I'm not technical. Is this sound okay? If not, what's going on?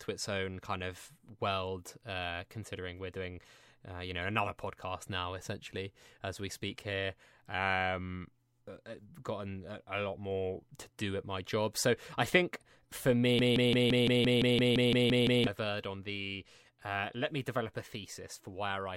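No. From 13.39 to 15.47 s the speech falls into a broken-record loop: a 0.17-second piece repeats 12 times back to back. The player or stream likely stalled and replayed its last fragment, so the speech meant for that stretch is missing.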